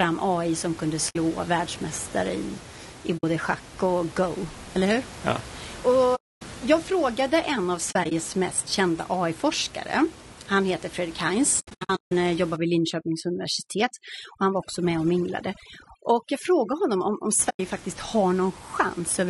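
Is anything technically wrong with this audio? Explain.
Yes, a few things. The whole clip has the rough, grainy quality of low-delay AAC compression, likely AAC-ELD at a low bitrate, around 32 kbps by the sound of it. Noise fills in between the pitch harmonics and the top end sounds synthetic.

AAC frame loss with muting shows up as soft-edged dropouts, where the decoder zeroed lost frames and the overlapping windows faded around the gaps. They come at 1.09 s and 3.17 s (60 ms each), 6.15 to 6.42 s (260 ms), 7.91 to 8.12 s (short scattered holes across 200 ms), 11.59 to 12.12 s (400 ms of holes scattered across 520 ms, the longest about 150 ms) and 17.49 to 17.60 s (100 ms).

From 12.56 to 17.39 s there's overdone noise removal. The tool is cutting bands near its noise estimate too hard, so quiet parts of the speech go with them and the background drops and breaks up into twinkly specks. 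That's happening against room noise that sits only about 18 dB under the speech.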